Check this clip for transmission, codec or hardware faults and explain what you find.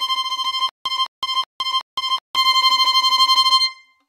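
There is one fault, a stutter with silent gaps, from 0.69 to 2.36 s. A 210 ms burst repeats four times, each followed by 164 ms of digital silence, every 373 ms. Likely a stalled stream replaying its last fragment. On the waveform, identical blocks alternate with flat silent gaps.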